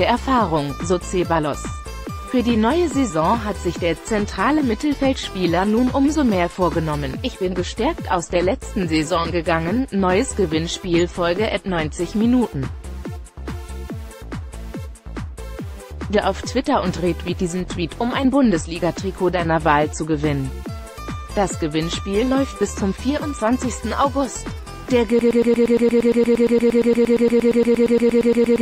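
At 25.19 s a broken-record loop begins and runs to the end. A fragment about 0.12 s long repeats exactly, back to back, roughly 30 times. It sounds like a rapid stutter. The player or stream likely stalled, and the following audio is lost.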